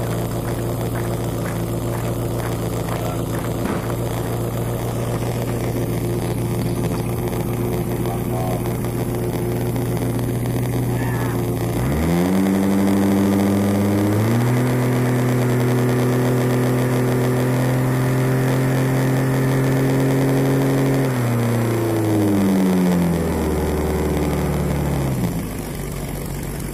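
From start to finish a buzz near 86.1 Hz runs under the sound, which plays at 0.938 times normal speed with timbre unchanged. This is a padded block size mismatch: short blocks are zero-filled to what fits a 512-sample read, leaving a gap every block.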